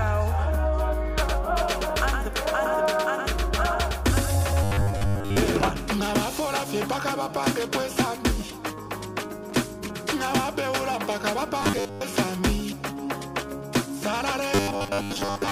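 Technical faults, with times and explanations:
1.23 to 5.69 s, doubled audio track: A second full-band copy of the sound runs roughly a tenth of a second behind the first, about 5 dB quieter, with no decay or room colouring. The result is a flat, slapback-like echo that starts and stops abruptly, likely from the audio being captured twice through a slower path. On a spectrogram, every onset and feature reappears as a fainter ghost shifted about 100 ms to the right. The waveform shows matching repeated transients at the same offset.
4.63 to 5.38 s, 11.61 to 12.01 s and 14.55 to 15.52 s, robotic sound from repeated short buffers: The sound turns into a rigid, metallic 100 Hz buzz that still loosely follows the original contour. New audio arrives too rarely, likely because of buffer underruns, so the same 10 ms slice is replayed over and over and most of the real material in these stretches is skipped. 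A spectrogram shows a comb of harmonics spaced 100 Hz apart and vertical striations every 10 ms. The waveform shows near-identical cycles repeating.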